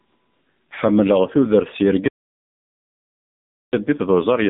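The speech has passed through the AMR narrowband mobile codec, squeezed into a phone-line band of roughly 150 Hz to 3.6 kHz with nothing above 3.8 kHz. The heavy damage, which fits a low rate near 6.7 kbps, leaves the voice muffled, buzzy and synthetic throughout.

From 2.08 s to 3.73 s, just after "tudert s", the input was likely lost through a broken link or device while the recording continued with silence. This audio dropout to silence cuts the sound off mid-flow for 1.65 s of total silence, with no room tone.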